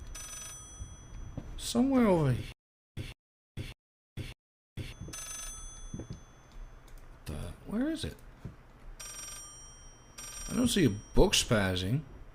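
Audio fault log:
2.52–4.92 s, stutter with silent gaps: the same 153 ms burst of audio plays four times, each followed by about 448 ms of dead digital silence, so it returns at an even 601 ms pace and sounds like a mechanical hiccup locked in place. This is likely a stalled player or stream that replays its last fragment on each retry and then runs dry. Whatever should have sounded across those 2.4 seconds is missing.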